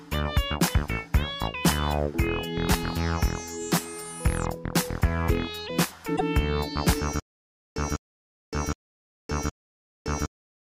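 At 6.15 s the audio jumps back and replays a 52 ms block, so about 52 ms of repeated frames are heard as a brief stutter that ends by 6.21 s. A block that short fits a couple of compressed frames being written or sent twice, and the clip runs 52 ms longer as a result. On a waveform the same small shape appears twice side by side. On a spectrogram a narrow slice is duplicated.

From 7.20 s to the end, the audio turns into a stutter with silent gaps. A 0.2 s burst plays, then about 0.56 s of digital silence follows, and the cycle repeats four times at an even 0.77 s period. The likely cause is a stalled player or stream replaying its last fragment on each retry before running dry, so the audio that should have filled those gaps is lost. The waveform shows identical blocks separated by flat lines, and the spectrogram shows matching columns divided by empty bands.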